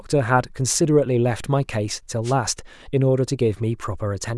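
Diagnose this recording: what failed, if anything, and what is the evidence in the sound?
A wireless microphone noise hit occurs in the analogue radio link ahead of the converter: a brief burst of static from 2.24 to 2.34 s, about 0.1 s long, over the speech. The FM carrier faded as reflected paths cancelled, letting receiver noise rise.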